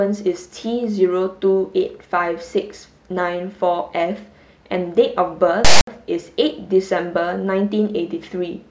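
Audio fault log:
5.65–5.87 s, file tags played as audio: a block of text metadata is decoded as if it were samples, giving a loud, lopsided rasp offset to one side with abrupt edges, then dead silence where the block's zero padding follows.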